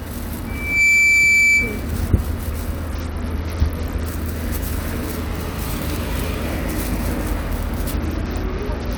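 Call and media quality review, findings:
Loudspeaker feedback squeal, 0.46–1.90 s: 2.3 kHz tone swells within about 0.4 s to roughly 10 dB over the sound. The mic is re-amplifying its own loudspeaker, with loop gain above unity at that frequency.

Bluetooth SBC bit pool drop, 2.89–4.06 s and 7.94 s to the end: dulled treble with gritty noise. This fits the bit pool falling from 28 to 8, near 72 kbps, which starves the upper sub-bands.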